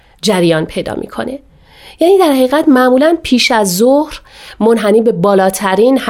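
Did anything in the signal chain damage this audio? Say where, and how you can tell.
No, nothing in this speech recording stood out as damage from any stage of the signal chain on listening.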